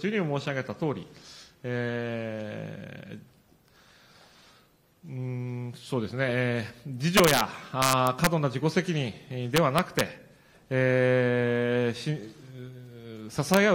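Integer overflow breaks up the sound at 7.17 to 7.41 s and again at 7.82 to 8.27 s. The level there runs about 4 dB past the integer limit. Peaks wrap to the opposite sign instead of being held. They are heard as violent, harsh cracks, sharper than clipping. A milder burst follows at 9.57 to 10.01 s, about 1 dB over. A last brief crack lands at 13.54 to 13.57 s, right at the limit.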